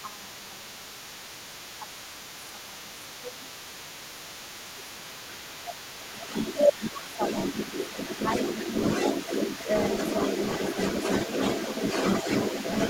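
From the very start and right through to the end, the other side's voice is leaking through, sitting at roughly 5 dB above the talker's own speech. The likely cause is a loudspeaker on the talker's end feeding the mic, with the echo canceller leaving a lot of that far-end voice in place.

On top of that there's speech suppressed in double talk at 0.01–0.94, 1.78–2.33, 2.51–2.94, 3.21–3.51, 4.26–6.06, 7.16–7.22 and 7.91–7.97 s. The talker's level ducks, mostly by around 10 dB, deepest near 15 dB around 1.8 s, and only lightly at 7.9 s. It's likely the canceller couldn't tell both voices apart and pulled everything down.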